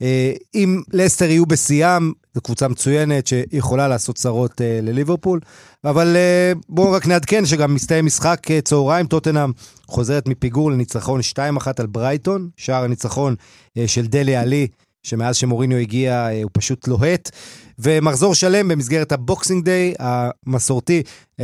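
Periodic USB or driver dropouts appear in this speech from 15.64 to 21.39 s: every 0.25 s a blocked bus or driver skips a fraction of a millisecond of audio, giving about twenty regular ticks.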